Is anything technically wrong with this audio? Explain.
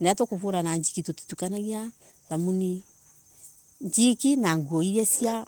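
No, nothing technically wrong can be heard here.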